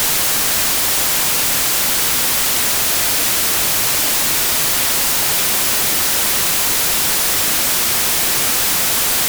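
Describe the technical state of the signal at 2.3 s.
At 2.3 s you're hearing samples built from the wrong bytes, and it isn't local to that moment; it runs from start to finish. Whatever read the file assembled each sample's bytes incorrectly, off by a byte or in swapped order, so the jittery low-order bits ended up as the big part of every value. That's why the sounds come across as loud, harsh broadband noise.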